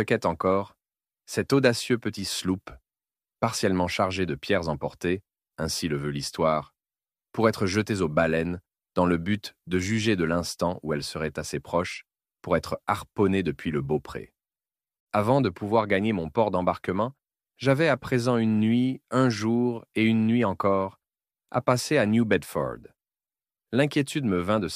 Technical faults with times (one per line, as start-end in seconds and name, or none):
none